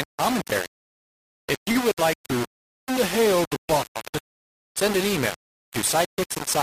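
From the first moment to the last, the speech is coated in a harsh, grainy fuzz that rises and falls with the voice itself. That's the signature of low bit depth without dither: the audio was most likely rounded to just 3 bits, so every sample snaps to one of a handful of levels. With no dither to break it up, the error tracks the signal, sitting only about 10 dB under it, and the quieter tails crackle or vanish.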